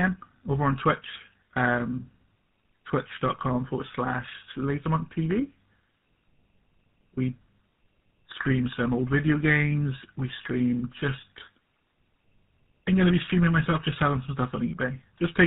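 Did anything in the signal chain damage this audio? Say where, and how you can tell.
Yes. At the codec stage, tandem speech coding runs through the whole recording: the speech is rough, muffled and warbly, with nothing above 3.8 kHz. That points to two GSM full-rate passes in a row, each coder re-encoding the previous one's already degraded output.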